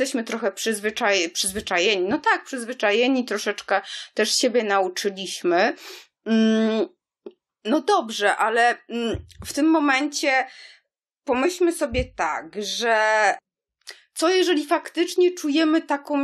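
No technical faults can be heard anywhere in the recording.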